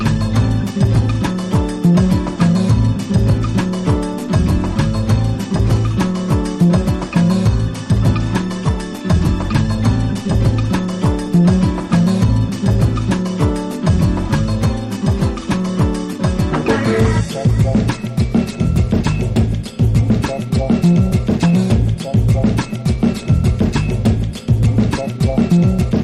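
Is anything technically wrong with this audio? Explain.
Yes. Two related timing faults run through the clip.

Clock drift between sender and receiver affects the whole recording. The sending device's audio clock runs about 4 percent fast relative to the receiver, so samples arrive slightly quicker than they are played out and the jitter buffer keeps filling. On its own this causes no single loud error. It creates a steady pressure the receiver has to relieve, and that pressure shows up as the timing edits described next. On a waveform there is no obvious gap or spike. The effect is only visible as the small discontinuities those edits leave.

Repeated timing corrections run from 0.71 s to 25.91 s. To keep its buffer from overflowing, the receiver keeps discarding short slices of audio, all in the same direction, at uneven intervals. The net effect is playback at about 104 percent of the original pace. 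Each cut is brief, so it is heard as a slight hiccup, a skipped fragment or an unsteady, faintly rushed tempo. On a spectrogram, events end abruptly at irregularly spaced points. A zoomed waveform shows small phase jumps where sections were spliced together.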